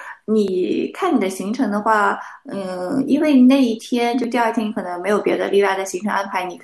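The recording software likely failed to read its audio buffer before the hardware overwrote it, so a dropped buffer (overrun) occurs twice in this speech. At 0.48 s about 10 ms of audio vanishes, and at 4.24 s roughly 20 ms is lost. Since the surviving audio on either side is spliced straight together with no gap, each point is heard as the sound jumping abruptly forward.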